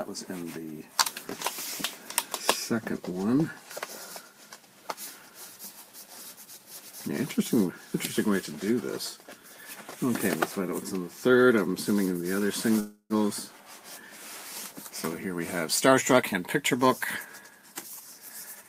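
At 12.79 s the audio stalls: the last sound carries on as a fading buzz or hiss, ends in about 60 ms of silence, and then resumes at 13.13 s from exactly where it stopped. Nothing is lost, but about 0.31 s of filler has been inserted. This is a call audio freeze. The likely cause is packets held up in transit, which let the jitter buffer run dry so the receiver stretched the last sound until delivery resumed. The pause adds about 0.31 s to the delay. Most of that extra delay is then worked off in two stretches of jitter buffer speed-up, where the audio sounds hurried but keeps its pitch. The first runs from 15.87 to 16.85 s at about 117% speed and removes roughly 0.2 s. The second runs from 17.24 to 17.71 s at about 112% and trims roughly another 0.07 s. In both, the receiver found more audio buffered than it wanted and repeatedly cut out short slices the length of one or a few pitch periods, so timing compresses without any change in pitch.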